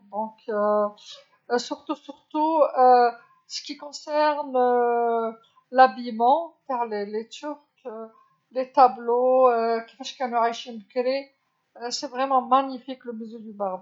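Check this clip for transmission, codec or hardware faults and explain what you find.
No faults detected.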